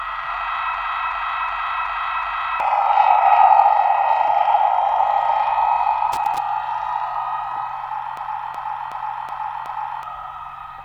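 A system hang loop runs from 0.74 to 2.60 s: the driver stalled while the hardware kept replaying its ring buffer, so one 371.52 ms slice repeats exactly five times at 2.69 Hz, a machine-gun stutter. The length fits a 16384-sample buffer, and about two seconds of audio are lost.

Loose connector crackle follows from 6.12 to 6.38 s, a brief irregular burst of scratching where a poor contact rapidly broke and remade the signal path, chopping the audio.

The same system hang loop returns from 8.17 to 10.03 s, again five exact repeats of a 371.52 ms slice at 2.69 Hz, and again about two seconds of audio are missing.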